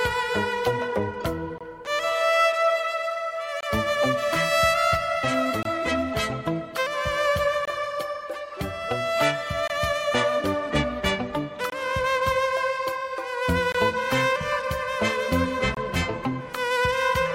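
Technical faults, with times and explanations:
1.58, 3.61, 5.63, 7.65, 9.68, 11.70, 13.72 and 15.75 s: gap between chunks. The audio arrives in 2.0 s chunks with 23 ms of silence inserted at each join. It is heard as brief, hard-edged dropouts. On a waveform, they show as flat, near-silent stretches; on a spectrogram, as clean empty vertical stripes.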